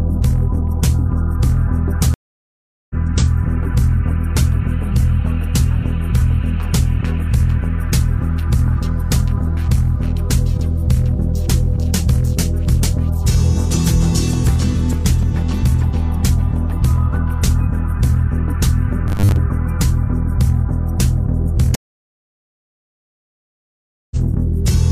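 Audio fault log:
2.14–2.95 s, stream reconnect: the connection dropped and the player restarted a fresh decoder mid-stream. About 0.76 s of silence follows, and the sound resumes roughly 0.7 s further on, so that stretch of audio is simply missing.
19.07–19.37 s, robotic sound from repeated short buffers: the sound turns into a rigid, metallic buzz near 100 Hz, with about half of it repeated material. This is likely from audio arriving too seldom and a 10 ms buffer being replayed while real audio is skipped.
21.75–24.17 s, stream reconnect: the link broke again and decoding restarted from a new point. About 2.36 s of silence follows, then the sound picks up roughly half a second later than where it stopped, leaving an audible jump.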